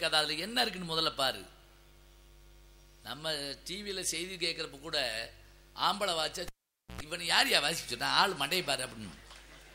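A cable pulled and plugged in interrupts the audio from 6.48 s to 7.01 s. A live lead is yanked from its socket, giving a sharp pop, and the sound then drops to near silence for roughly 0.48 s. As the plug goes back in, only its tip makes contact for about 0.1 s, letting in a burst of 60 Hz mains buzz before a second pop marks the full connection and the sound's return.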